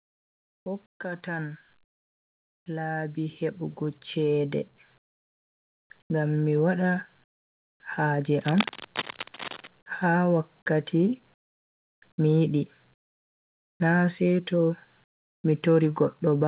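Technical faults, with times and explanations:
0.0–0.66 s, 0.86–1.0 s, 4.98–5.9 s (just before "ngam mi wada"), 6.02–6.1 s, 7.24–7.8 s (after "ngam mi wada"), 11.34–12.02 s, 12.94–13.8 s and 15.04–15.44 s (after "na seto"), comfort noise in place of the background: In the pauses, the room tone, which sits about 41 dB below the loud speech, gives way to a flat, featureless hiss. This is likely because the sender stopped transmitting in silence and the receiver synthesised filler noise. The level mostly drops, from about 3 dB to about 30 dB lower, and rises by about 2 dB at 6.02 s. On a spectrogram these gaps show as smooth, uniform noise with no texture, cut off sharply at 4 kHz like the rest of the call-band audio. On the waveform they appear as steady low-level bands.
2.65–4.61 s, automatic gain rising: Over about two seconds, the automatic gain control raises its gain by 8 dB, so the speech and the background swell together. 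The waveform envelope grows steadily across this stretch, and the spectrogram brightens evenly at all frequencies instead of in any single band.
8.41–9.67 s, cable scratch noise: Dense, ragged scratching and rustling sits on top of the signal for just over a second, roughly 10 dB below the speech. The likely cause is a worn cable or connector with fluctuating contact resistance. On the spectrogram it appears as irregular broadband speckle, and the waveform shows spiky, uneven bursts.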